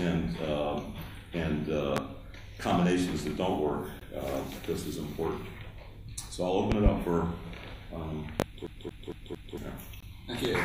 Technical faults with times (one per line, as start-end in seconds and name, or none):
1.97-2.00 loud pop
4.00 gap between stream segments
6.72-6.90 loud pop
8.40-8.44 loud pop
8.67-9.57 CD stuck on one turn
10.00-10.03 gap between stream segments
10.45-10.49 loud pop